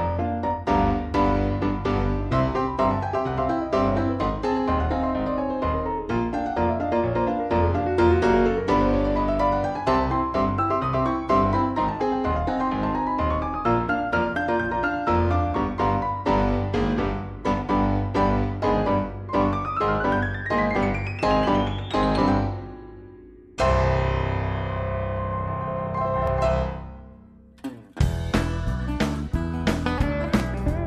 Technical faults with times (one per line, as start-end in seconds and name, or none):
none